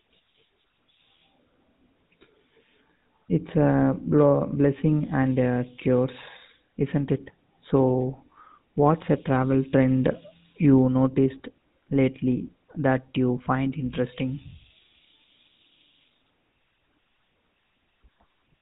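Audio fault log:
Throughout: GSM full-rate codec. The speech is confined below 4 kHz and carries a plainly audible buzzy, gravelly roughness, consistent with a rate of about 13 kbps. The codec models the vocal tract and drives it with regularly spaced pulses built from only every third excitation sample, so fine detail becomes rasping texture. A simple low-pass filter would muffle the sound without adding grit, and newer phone codecs sound smoother at similar bandwidth.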